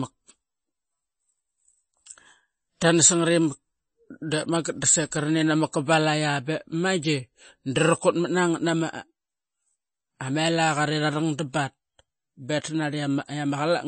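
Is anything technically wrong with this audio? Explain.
Yes. Throughout the speech, nothing is present above 8.4 kHz, and the remaining sound has a plainly audible watery, swirling quality with metallic chirps on s sounds and smeared attacks. This is likely MP3 compression at a low bitrate, consistent with about 32 kbps, where the encoder cuts the treble and drops weak frequency lines that flicker between frames.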